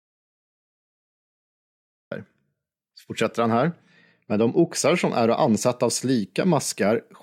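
The input signal was likely lost before the clip began, so silence was written. The clip opens in an audio dropout to silence, dead silence with no room tone, until speech cuts in abruptly at 2.11 s, mid-flow, with the earlier part missing.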